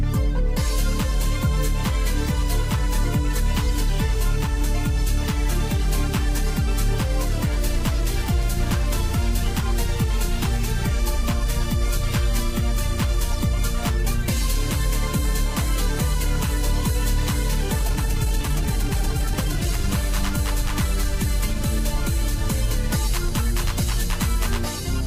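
A time-stretched section runs from 17.77 to 19.77 s. The audio suddenly plays about 1.83 times faster and sounds rushed, yet its pitch does not rise. The likely cause is software squeezing that stretch to fit a length by dropping short pieces.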